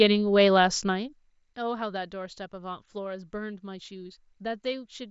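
Speech clip, no technical faults detected.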